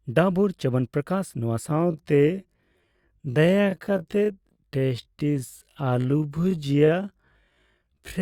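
From 1.64 s to the end, the speech abruptly slows to roughly half pace, 0.53 times the original, while pitch stays put. This is a time-stretched section, likely from software lengthening the audio by repeating short pieces, which leaves it dragging.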